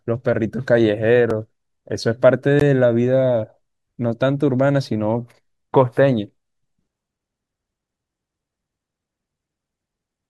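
A block of digital silence hits the speech at 1.30 s, with a second at 2.60 s. In each, a run of samples drops out to silence and returns with no fade, so the waveform jumps abruptly at both edges. The first gap lasts about 3.7 ms and is too short to hear as a gap; it comes across as a single sharp tick. The second, at 16 ms, is long enough to register as a brief hole, a small pop-like dropout.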